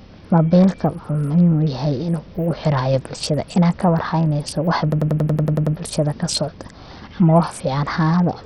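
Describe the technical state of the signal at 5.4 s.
At 5.4 s the signal is caught in a system hang loop, running from 4.92 to 5.76 s, just before "bulshada kasocdo ama wax". The system froze while the hardware kept replaying one 93 ms block, which fits a 4096-sample buffer. It repeats about nine times at 10.8 Hz, a machine-gun stutter. Across the whole clip the speech also has dull, flickering treble with gritty noise and aliasing, likely from Bluetooth SBC compression at 64 kbps.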